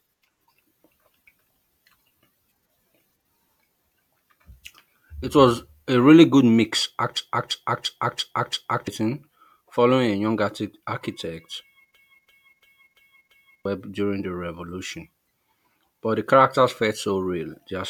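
At 7.17 s and again at 11.95 s, the system stalls in a system hang loop. The computer or driver froze while the audio hardware kept replaying the same ring buffer, whose 341 ms length fits a 16384-sample buffer. Each time, one slice of speech repeats exactly five times at about 2.9 per second, a mechanical stutter lasting until 8.88 s and 13.65 s respectively, and roughly a second and a half of real audio goes missing.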